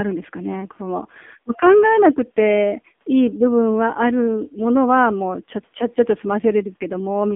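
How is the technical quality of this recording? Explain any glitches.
The recording has been squeezed through a low-rate phone codec. The AMR narrowband mobile codec damage runs through the whole clip. Nothing passes above 3.7 kHz, and the line band sits near 200 Hz to 3.6 kHz. The codec rebuilds speech from a vocal-tract model and a few pulses per frame. The heavy buzzy, synthetic texture fits a low AMR-NB rate near 6.7 kbps.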